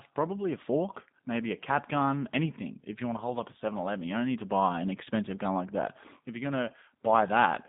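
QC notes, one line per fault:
Throughout, G.729 codec: the speech sounds boxed-in, plainly rough and synthetic, with nothing above 3.8 kHz and the band held to about 150 Hz to 3.7 kHz. A low-rate coder is rebuilding each frame from a vocal tract model, pitch prediction and sparse pulses, which fits an 8 kbit/s coder.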